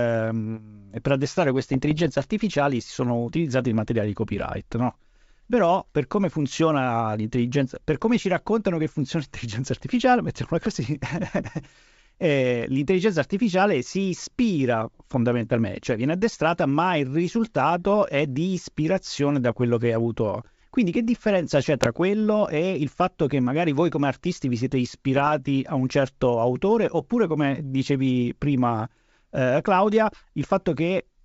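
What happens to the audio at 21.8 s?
Right there you get bit errors on an ADPCM link, from about 21.77 to 21.88 s over the G.722 path. A small fraction of flipped bits knocks the decoder's step size and predictor off track, so each error smears into pops and rough, jumpy bursts.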